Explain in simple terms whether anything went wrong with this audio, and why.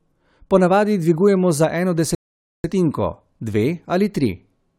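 Something did go wrong: a rebuffering stall. At 2.15 s the speech cuts to silence, and it picks up again at 2.64 s. The player ran out of downloaded audio and had to wait for more to arrive before it could continue. When it resumes, it carries on from exactly the point where it stopped, so nothing is skipped or lost. The clip simply gains about half a second of dead air in the middle.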